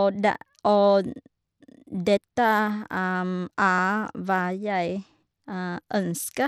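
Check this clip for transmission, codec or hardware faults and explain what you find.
Two kinds of fault are audible, one across the whole clip and one at two isolated moments.

Throughout, the speech sounds dull, with flickering treble and a gritty edge, likely Bluetooth SBC compression at a small bit pool, consistent with around 96 kbps.

At 2.17 s and 3.79 s a skip likely marks a dropped buffer (overrun): roughly ten milliseconds went missing before being read, leaving a jump.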